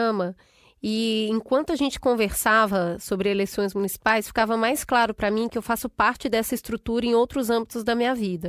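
No technical faults are audible.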